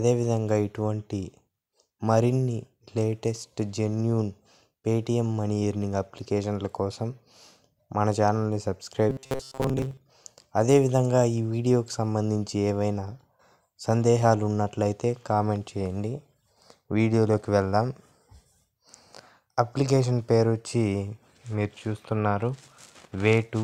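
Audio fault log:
9.10–9.97 s, robotic sound from repeated short buffers: the sound turns into a rigid metallic buzz at 133 Hz, most likely because new audio arrived too seldom and a 7.5 ms slice was looped to fill the gaps, skipping much of the real signal. On a spectrogram this shows as evenly spaced horizontal harmonic lines at multiples of 133 Hz. The waveform shows one short cycle copied over and over at a fixed interval.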